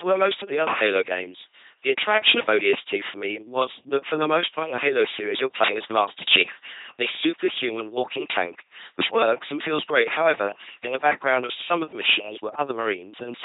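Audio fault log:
throughout LPC-10 vocoder. Speech turns into a harsh robotic buzz, with nothing above 3.8 kHz. Each instant becomes pure buzz or pure hiss, which fits a 2.4 kbit/s coder.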